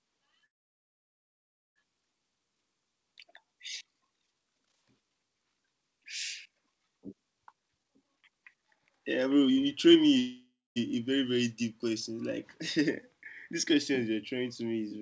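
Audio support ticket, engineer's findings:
Call audio freeze at 0.46–1.78 s and 10.19–10.78 s. Packets likely stalled and the jitter buffer ran dry. A brief fading continuation of the last sound drops to near-silence (about 1.28 s, then about 0.21 s). Audio resumes where it stopped, so nothing is lost, but the delay grows by 1.3 s and 0.57 s.

Jitter buffer speed-up at 7.53–10.16 s. The buffer was over target, so the receiver cut pitch-period slices repeatedly, about a second in total. Playback runs at 144% with pitch unchanged, sounds rushed, and comes just before the second freeze. On the G.722 path nothing is audible above 8 kHz.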